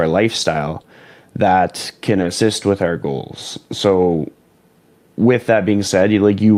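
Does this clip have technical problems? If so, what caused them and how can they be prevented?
Yes. Short concealed packet loss: about 20 ms of audio missed the decoder at 0.81–0.85 s, just before "that can", and at 2.21–2.25 s, before "with our goals". The receiver extended the preceding sound to bridge each gap, leaving a brief smear. A deeper jitter buffer or forward error correction would prevent this.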